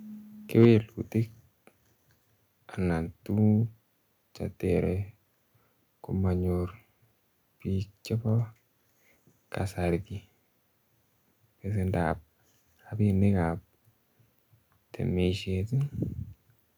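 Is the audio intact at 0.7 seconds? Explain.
No. At 0.7 s the sound is still running about 4 dB quieter than it was a moment earlier. From 0.6 to 0.65 s the loudest peaks are flattened, driven about 3 dB past the converter's limit, with roughly one sample in twenty clipped. That gives a short, harsh crackle. This is likely microphone overload: the input level was high enough that the converter simply cut off the wave tops. A limiter would round them off smoothly, but these are squared off and sound gritty.

Right after, at 0.65 s, both the voice and the background drop together in a single step of about 4 dB, and they stay at that lower level through 0.7 s. The likely cause is the microphone volume being stepped down by the call software in response to the clipped peak. What sets it apart from automatic gain riding is the shape of the drop: one abrupt step instead of a gradual fade. It also differs from a dropout, because the sound continues, just quieter.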